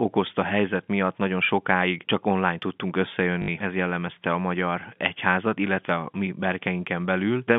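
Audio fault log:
3.42–3.48 s, packet loss with last packet repeated: between "sokáig csak online tudtunk" and "ez jellemezte a magyar", about 60 ms of audio went missing and the receiver replayed the last good chunk in its place, which fits three lost 20 ms packets. The replays seldom line up with the pitch, and the short run buzzes at about 50 Hz. Unlike a silent dropout, the gap is filled with a robotic stutter, heard over the narrow 150–3500 Hz telephone band.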